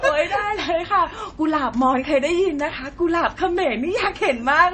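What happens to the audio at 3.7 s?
At 3.7 s the speech carries the same damage heard across the whole clip: a watery, swirling quality, with s sounds turning to metallic chirps and consonant onsets smeared. This is likely MP3 compression at a low bitrate, which fits about 32 kbps. Short of bits, the encoder drops weak frequency lines frame by frame and cuts everything above 8.3 kHz. On a spectrogram the top band is empty above that line, and the upper region below it shows flickering, patchy blocks.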